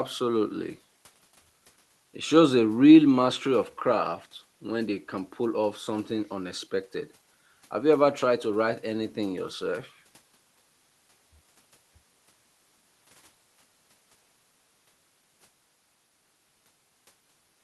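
Nothing goes wrong anywhere in the speech here; it simply sounds like a regular call, with the top end rolling off around 12 kHz in a way that fits an Opus link at a modest bitrate.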